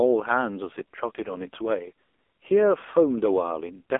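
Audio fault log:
Throughout, AMR narrowband mobile codec: buzzy, synthetic speech cut off above 3.6 kHz, as the AMR-NB link rebuilds it from sparse pulses, which fits a rate near 5.9 kbps.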